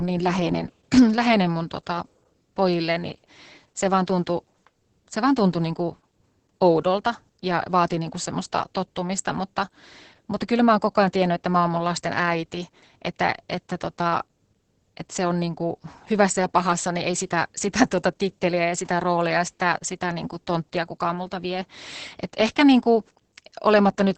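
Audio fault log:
throughout Opus voice compression: a starved SILK coder, consistent with about 10 kbps, coarsely codes the excitation and cuts everything above 8.6 kHz, leaving speech muffled, hoarse and robotic.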